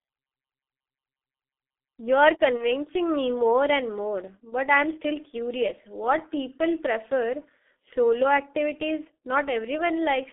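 Throughout the clip the speech carries heavy G.723.1 codec damage. It sounds muffled and hoarse, with smeared consonants. The band runs only from 250 Hz to 3.5 kHz, and the coarse, slowly updated voice model fits a low-rate coder of about 6 kbit/s.

From 2.58 to 2.65 s, VoIP packet loss concealed by the speech codec produces a brief, fading extension of the preceding sound. The decoder bridged a gap consistent with one lost 30 ms frame, and the voice stays weakened for tens of milliseconds after the stream recovers.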